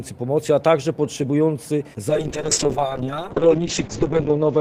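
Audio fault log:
2.1–4.6 s, call bitrate drop: From 2.1 s the sound turns coarse and watery, and everything above about 8 kHz vanishes. The encoder was starved of bits, which fits a fall from roughly 32 kbps to 6 kbps. It never recovers before the clip ends.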